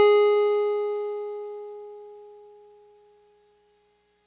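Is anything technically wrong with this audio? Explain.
No, nothing is technically wrong with this music clip. It has come through a call path using G.711 mu-law, which fits a 64 kbps stream, so there is nothing above 4 kHz and the top end sounds narrow, as that codec always leaves it.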